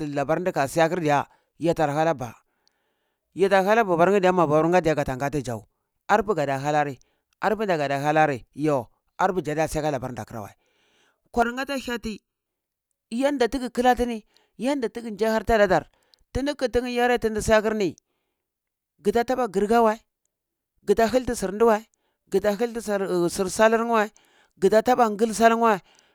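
Channel delay (comb filtering), 11.42 to 12.46 s: one channel runs under a millisecond late, and summing cancels bands from about 700 Hz, sounding hollow.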